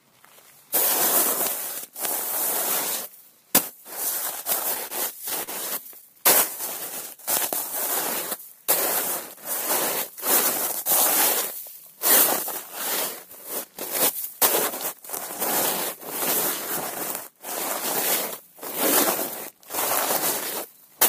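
At 4.87 s and again at 5.43 s there's a short stall from a late packet. The jitter buffer ran dry, so the receiver held the last bit of sound for about 27 ms, then 42 ms, and picked up where it left off. You get a brief smeared hold with a faint buzz or dip, but nothing's actually lost.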